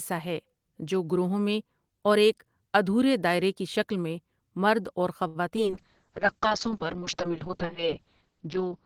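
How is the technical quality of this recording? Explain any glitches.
The recording has two kinds of network glitch packed into about half a second, followed by a drop in quality that lasts until the end.

At 5.27 to 5.37 s there is a short stall from a late packet. A packet arrived late, the jitter buffer ran dry, and the receiver stretched the last sound for 75 ms before resuming from the same point. Nothing is lost, but that sound is held unnaturally long. On a waveform, the same short cycle repeats in a block. On a spectrogram, the harmonics run flat and unchanging for that span. Everything after it is shifted 75 ms later.

At 5.49 s and again at 5.56 s there is short concealed packet loss. Each time, about 20 ms of audio never arrived. The decoder papered over the gap by continuing the preceding sound for roughly 10 ms, then blended back into real audio. Both spots come across as a quick smear or wobble, and part of the underlying sound is simply missing. 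A spectrogram shows a brief smudged patch with softened edges. The waveform shows the fill easing back into the real signal.

From 5.68 s to the end there is a call bitrate drop. The bandwidth estimate fell, and the encoder was pushed down to a rate that fits roughly 6 kbps. It coded much more coarsely and discarded everything above about 6 kHz, where it had been keeping content up to 20 kHz. The sound turns muffled for the last three seconds. On a spectrogram, energy above 6 kHz cuts off abruptly, leaving a hard, flat ceiling.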